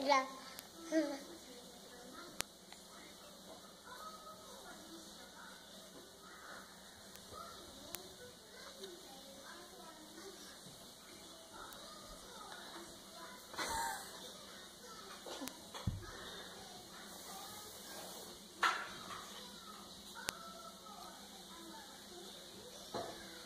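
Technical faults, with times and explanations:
0.59, 2.41, 7.16, 7.95, 11.73, 15.48 and 20.29 s: bit error spikes, sharp broadband ticks peaking at about -22 to -10 dBFS, where a flipped bit briefly throws a sample value far off.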